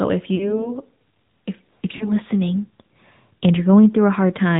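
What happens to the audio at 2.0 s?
Lost AMR speech frames hit from 1.96 to 2.11 s. The decoder couldn't use the damaged frames, so it repeated the last good pitch and vocal-tract settings at falling gain. The result is a short, smeared, fading warble, consistent with roughly 40 ms of lost audio, before the speech returns briefly weak.

Around that moment, the AMR narrowband mobile codec is also plainly audible. Everything above 4 kHz is missing, and the modelled excitation gives the speech a buzzy, synthetic edge, which points to a mid-rate mode near 10.2 kbps.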